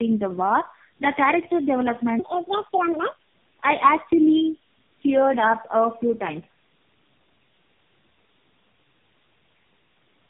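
From start to finish the speech carries tandem speech coding. Nothing reaches above 3.6 kHz, and the sound has the layered roughness, dullness and warble of several narrowband speech codecs run in a row, about three of them, probably ending in an AMR-NB-type coder, each re-encoding the last one's damage. A single low-bitrate codec would sound thin but steadier. Here the artefacts compound into a smeared, watery grain.

From 2.19 to 3.27 s a section plays at the wrong speed, 1.61 times too fast, so pitch jumps by about seven semitones and the speech turns hurried and chipmunk-like before snapping back. Timing and pitch shift together, which separates it from a pitch-shift effect or a dropout. The likely cause is that this stretch was fitted to the wrong clock during editing or playback.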